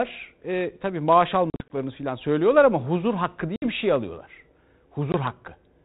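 Speech over a 32 kbit/s G.726 ADPCM link shows packet loss on an ADPCM call at 1.5–1.77 s (100 ms dropped in runs up to 40 ms), 3.56–3.69 s (60 ms) and 5.12–5.15 s (20 ms). Unlike plain dropouts, each hard silent gap is followed by a brief level or distortion error while the decoder's predictor and step size resynchronise.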